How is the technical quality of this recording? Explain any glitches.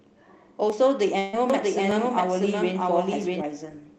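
The recording has three kinds of glitch: isolated clicks, one gap that was concealed, and a stretch where the speech plays twice over itself. Above all of it, the sound stops at about 12 kHz, which fits a low-bitrate Opus call path.

Dropped samples: Sharp single clicks occur at 0.70 s, 1.91 s and 3.22 s. Each is likely a fraction of a millisecond of missing samples. The waveform jumps straight to a later value, and that step shows up as a thin vertical line across the spectrum.

Burst of packet loss: From 1.19 s to 1.35 s, about 140 ms of audio never arrived. The receiver filled roughly 134 ms of that by continuing the last sound and fading it, so a held buzz or hiss appears. The speech then resumes further along, with the missing stretch gone.

Doubled audio track: From 1.50 s to 3.42 s, a second full-band copy runs at about the same level, trailing by roughly 0.7 s. It is dry, with no room decay, and it cuts in and out abruptly. 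This is likely a second capture path or an edit that left overlapping copies.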